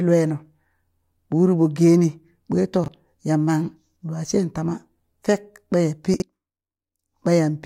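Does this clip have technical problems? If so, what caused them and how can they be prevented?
Yes. Chunks out of order at 2.84–2.88 s and 6.14–6.22 s, after "ɓaya pi": 20 ms chunks play one and three chunks late, leaving jumbled sound. Prevent it with sequence-numbered, reordering buffers before playback or writing.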